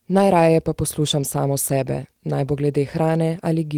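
No technical faults can be heard anywhere in this speech recording. At no point does anything in the signal chain intrude on what was captured.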